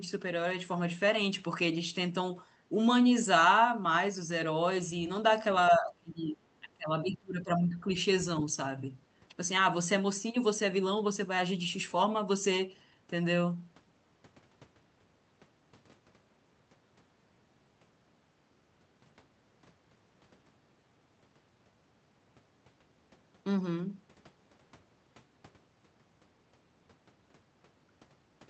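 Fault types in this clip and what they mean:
Speech suppressed in double talk: the speech drops sharply from 5.7 to 6.37 s and again from 6.6 to 7.94 s, roughly 25 dB down at its deepest, likely an echo canceller turning down the near talker while both ends spoke at once.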